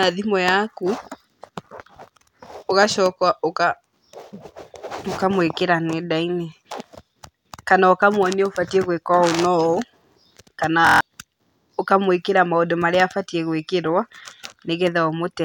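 A speech recording with a system hang loop from 10.87 to 11.01 s: the system froze while the hardware kept replaying one buffer, so a 23.2 ms slice repeats six times as a 43.1 Hz buzz, fitting a 1024-sample buffer, and roughly 150 ms of speech vanishes.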